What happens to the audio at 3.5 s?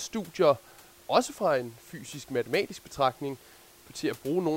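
Nothing goes wrong at 3.5 s; the speech carries on intact, with only the room's own background noise sitting about 26 dB beneath it.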